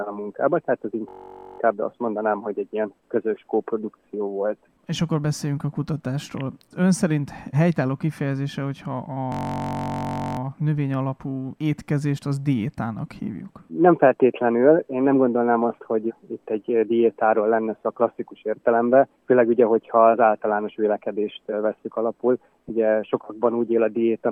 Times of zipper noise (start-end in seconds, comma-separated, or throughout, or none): none